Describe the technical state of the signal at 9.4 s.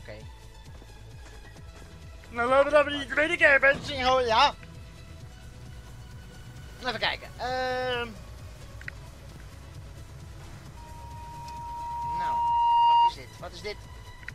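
At 9.4 s the signal is at the end of a short chunks out of order fault spanning 9.32 to 9.40 s. A 40 ms chunk arrived one chunk late and plays after the chunk that should have followed it, so the two swap places. The three hard joins this creates leave a brief jumbled moment. Unlike a dropout, nothing is missing and no gap of silence appears; the sound is reordered, not lost.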